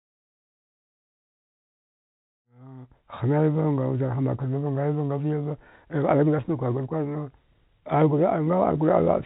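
Nothing stood out on listening; the speech has the narrow telephone bandwidth, with nothing above about 3.8 kHz, and it fades in smoothly from around 2.5 s to full level by 3.35 s.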